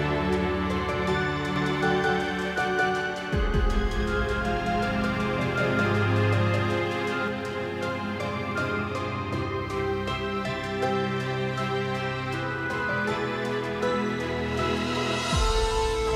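A second capture path or a misaligned edit has likely layered the audio on itself, producing a doubled audio track from 1.56 to 7.28 s: an equally loud, full-band copy trails about a fifth of a second behind, dry, switching on and off abruptly.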